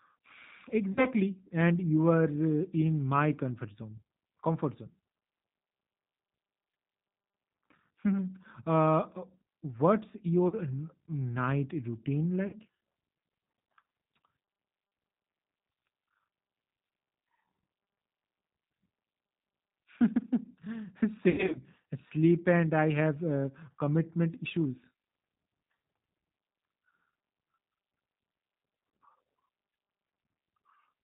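G.729 codec throughout: the speech is rebuilt at 8 kbit/s from a vocal tract filter and a few pulses per frame. Nothing above 4 kHz survives, and the voice sounds plainly rough and synthetic.

VoIP packet loss concealed by the speech codec occurs at 0.93 to 1.06 s, 10.48 to 10.55 s, 12.47 to 12.56 s and 21.30 to 21.63 s. The decoder stretched its last pitch and filter over gaps of 40, 40, 60 and 160 ms. The last gap was scattered, with a longest run of 80 ms. Each gap leaves a fading buzzy tone or coloured noise, and the speech stays weak or distorted just afterwards.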